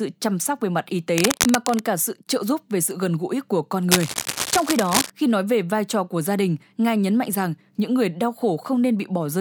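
From 1.18 to 1.80 s, after "sóc về mặt y", and again from 3.91 to 5.11 s, after "gần gũi của con", cable scratch noise lays dense, uneven rustling bursts only a few dB under the speech, likely from a worn cable or connector shifting its contact resistance.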